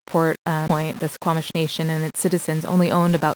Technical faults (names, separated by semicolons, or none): low bit depth without dither; skip ahead; jitter buffer speed-up